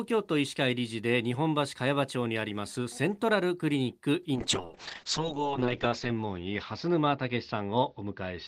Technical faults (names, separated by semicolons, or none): call bitrate drop